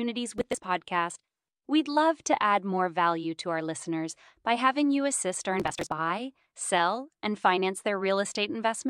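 Speech with two bursts of processor overload crackle, at 0.38–0.64 s and 5.60–5.92 s. Many buffers of roughly 10 ms each miss their deadline in rapid succession, and each miss drops that slice of audio, leaving hard-edged gaps that merge into a gritty tearing over the speech.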